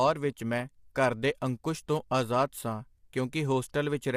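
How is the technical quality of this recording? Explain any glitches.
The recording has one clearly audible fault that runs for the whole of the speech: low-delay AAC compression damage. From start to finish the voice sounds rough and grainy, with a noisy haze filling the gaps between the pitch harmonics and a top band that sounds dulled and synthetic. The likely cause is AAC-ELD coding at a rate that fits roughly 32 kbps. Its frames of about 500 frequency lines are coded with so few bits that quantization noise spreads between the harmonics.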